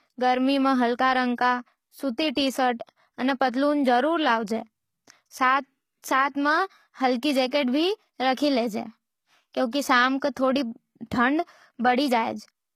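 From the start the speech carries plainly audible HE-AAC compression damage, likely at a low bitrate near 20 kbps: treble is rebuilt by band replication, sibilants sound gritty, and nothing remains above 14.9 kHz. At 6.02 s a pre-echo smears about 17 ms of codec noise ahead of an attack, giving a brief hiss before it and a softened onset.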